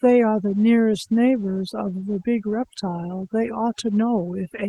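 Overdone noise removal runs throughout, with the suppressor set too aggressively and switching off frequency bands near its noise estimate. The background drops and breaks up into twinkling specks, and the speech is heard through a call path whose high end stops around 12 kHz.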